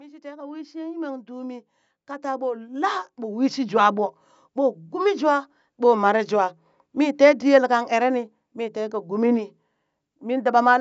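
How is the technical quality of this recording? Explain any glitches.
The recording has one clear glitch: the level climbs steadily at the start. From 0.05 to 4.71 s, automatic gain rising lifts the speech and the background together by about 17 dB, as the gain control judged the input too quiet and turned it up gradually. Unlike pumping, which dips and recovers around loud moments, this is one slow, continuous swell. The call microphone processing is working normally, trimming only the lowest bass.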